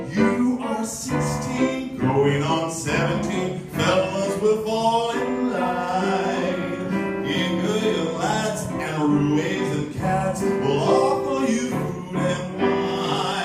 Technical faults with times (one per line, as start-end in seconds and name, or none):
none